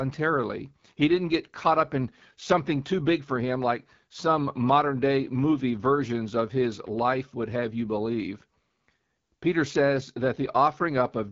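From start to finish the speech has been through the AMR wideband (HD Voice) codec, and it's clearly running at one of its lowest rates, which fits 8.85 kbit/s. At that rate the codec's model of the voice can't keep up, so the damage is plainly audible: a rough, raspy grain over everything. The top end is synthesized rather than carried through, and nothing at all comes through above 7.5 kHz.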